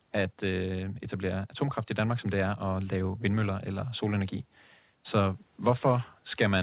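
No technical faults are audible.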